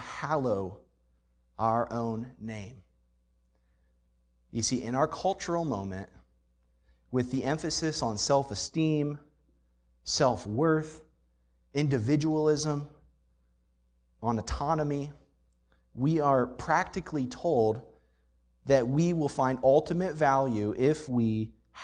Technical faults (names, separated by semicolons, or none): lost packet rebuilt from error correction